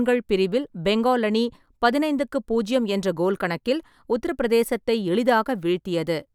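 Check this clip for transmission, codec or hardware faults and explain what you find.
No transmission, codec or hardware faults are audible here.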